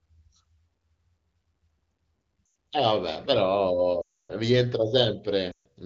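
Radio errors corrupted speech frames, so the wideband decoder discarded them and rebuilt the gaps from its last good pitch and vocal tract settings at falling gain. These are lost AMR speech frames. At 2.45 to 2.55 s (100 ms) and 5.51 to 5.66 s (140 ms), speech drops to near silence within two frames. The 280 ms run at 4.02 to 4.36 s drops to near silence within two frames, then returns weak or rough against the clear HD Voice band.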